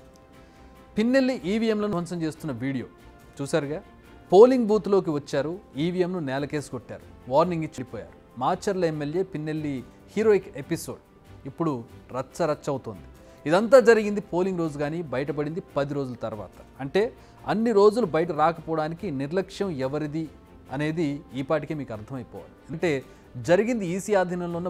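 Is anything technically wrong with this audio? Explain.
Yes, there are compressed frames skipped at 1.74–1.93 s, 7.69–7.78 s, 18.28 s and 22.73 s. Whole coded frames never got decoded, so the audio jumps ahead about a tenth or a fifth of a second.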